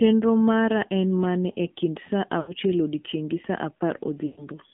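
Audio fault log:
Throughout: AMR narrowband mobile codec. The whole clip has that phone-call sound. Everything sits in a band from about 150 Hz to 3.6 kHz, so there's no air or sibilance on top. The speech has a buzzy, synthetic edge because the codec rebuilds it from a vocal tract model fed by a handful of pulses, and the damage is plainly audible, which fits a low mode around 7.4 kbps.
2.40–2.54 s and 4.26–4.47 s: lost AMR speech frames. Two short dropouts here. The first lasts about 80 ms and the second about 120 ms, which fits four and six lost 20 ms frames. The decoder covers each gap by repeating the last good pitch and vocal tract settings at falling gain, so the sound smears and sags toward silence. The longer second gap fades further, then the speech comes back thin and rough for a moment.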